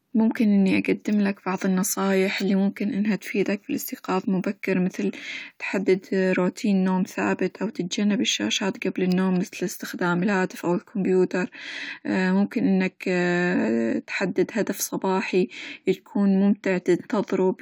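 The recording carries no audible technical fault anywhere in the signal.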